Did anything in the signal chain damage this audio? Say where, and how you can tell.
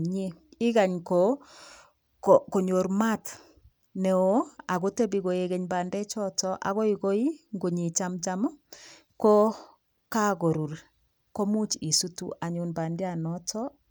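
Yes, at the codec stage of the Bluetooth link: a Bluetooth SBC bit pool drop from 4.28 to 6.06 s. The speech suddenly loses its treble and takes on a gritty, grainy noise, then brightens again. That fits the sender cutting the bit pool from about 28 to 13, near 100 kbps, so the top sub-bands get almost no bits and the rest are coarsely quantised. On a spectrogram the upper bands go dark and speckled; the waveform envelope barely changes.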